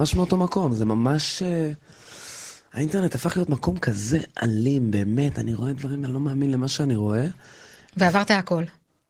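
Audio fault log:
Throughout, Opus voice compression: the speech has been squeezed through Opus in hybrid mode, with its linear-prediction SILK layer carrying the lower band and a CELT layer above 8 kHz, at a rate that fits about 16 kbps in 20 ms frames. With so few bits the excitation is coded coarsely, so the voice comes out plainly hoarse, muffled and slightly robotic.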